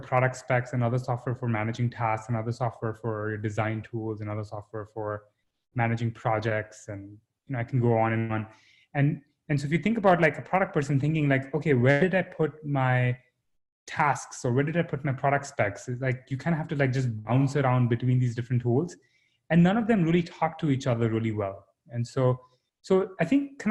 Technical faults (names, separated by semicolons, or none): short concealed packet loss; burst of packet loss